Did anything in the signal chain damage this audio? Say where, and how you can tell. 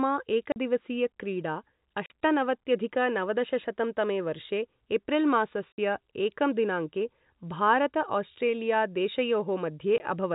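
Yes. The speech drops to dead silence with hard edges at 0.52–0.56 s, 2.06–2.10 s, 5.72–5.78 s (just before "एकं दिनाङ्के") and 9.98–10.00 s. The gaps of 40, 40, 60 and 20 ms fit 20 ms packets. This is packet loss filled with silence in the network stage of this G.711 telephone call.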